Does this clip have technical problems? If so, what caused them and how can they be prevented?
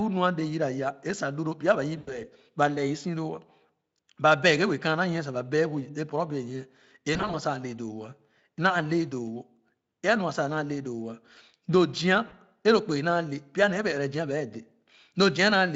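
Yes. At 1.97–2.21 s, 7.13–7.36 s and 12.27–12.33 s the speech smears into a fading buzzy tone or coloured noise and stays weak briefly afterwards. This is VoIP packet loss concealed by the speech codec: the Speex decoder rebuilt missing packets from its last pitch and filter. About 100 ms went missing at 2 s, 100 ms in short gaps at 7.1 s, and 40 ms at 12.3 s. A steadier network path with a larger jitter buffer, or forward error correction, would prevent it.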